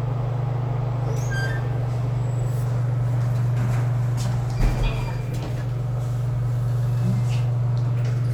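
Nothing stood out as a technical problem anywhere in this recording of sounds when listening to it.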